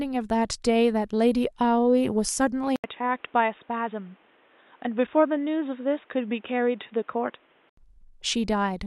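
From 2.76 to 7.77 s, after an 80 ms gap, the speech sounds dull, cut above 3.8 kHz: likely an input switched to a poorer device.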